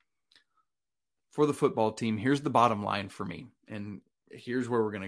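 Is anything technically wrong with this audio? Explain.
No, nothing in this speech recording points to a technical problem with the signal.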